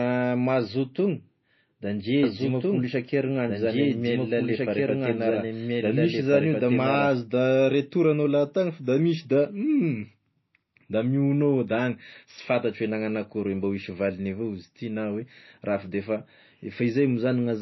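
MP3 compression runs through the whole speech clip. The audio has nothing above 5.8 kHz, and the codec damage is plainly audible. The band above that point is simply missing, and the weaker parts of the spectrum flicker in and out from frame to frame, giving a watery, swirling texture with smeared consonant attacks. That pattern is most likely lossy encoding at a low bitrate, which fits a rate of around 24 kbps.

A doubled audio track starts at 2.23 s, right after "da ndre", and lasts until 7.09 s. A second full-band copy of the speech plays about one and a half seconds behind the original, at roughly the same level, so the two overlap and compete. The copy has no reverb tail or room colouring, and it starts and stops abruptly. This most likely comes from a second capture through a slower path or from an edit that left two out-of-step copies in place.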